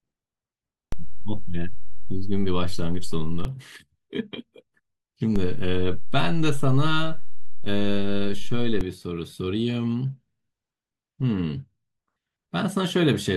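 At 0.92 s the waveform's zero line jumps by about -17 dBFS, a DC step, and holds until it drops back at 3.45 s. The same happens again from 5.36 to 8.81 s. Each jump lands as a low thump, while the speech carries on unchanged.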